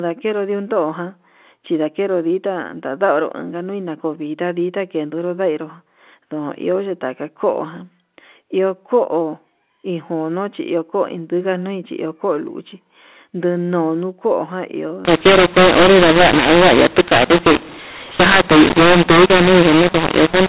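From 15.05 s to 20.49 s, the speech shows a mu-law and A-law mix-up: G.711 samples encoded as A-law are decoded as mu-law, which scrambles their levels. The speech turns harsh and distorted, and pauses fill with noise.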